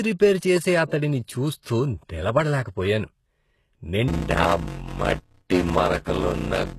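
HE-AAC compression runs throughout the speech, with damage that is plainly audible. The top of the spectrum sounds synthetic: the upper bands were likely rebuilt by spectral band replication, copying lower content upward under a coarse envelope rather than coding it directly. The s sounds come out gritty and lispy, harmonics fail to line up above the crossover, and nothing reaches past 12.3 kHz, which fits a very low bitrate of around 16 kbps.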